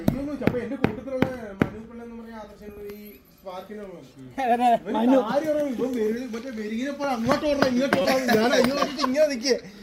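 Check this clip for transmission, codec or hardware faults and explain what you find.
There's one fault worth flagging. From 8.02 to 8.05 s there's a corrupt frame decoded: damaged bits in a couple of compressed frames got played anyway, so energy lands at wrong frequencies, giving a short, fairly loud chirp, blip or burst of noise peaking around -10 dBFS.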